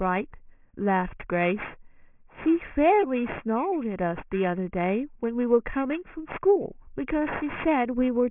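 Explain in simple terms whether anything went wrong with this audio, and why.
The audio was converted to a much lower sample rate without first removing the high frequencies that rate can't hold, which sounds consistent with a drop from 24 kHz to 6 kHz. This is aliasing, and it runs through the whole clip. Everything above 3 kHz folds back down into the range below it, landing at wrong, unrelated pitches. Hissy sounds like s and sh come out gritty and metallic.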